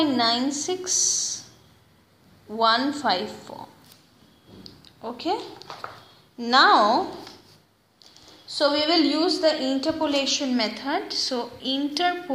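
Dropped samples at 8.83 s: a single sharp click, likely from a couple of samples going missing, making the waveform jump abruptly across a fraction of a millisecond.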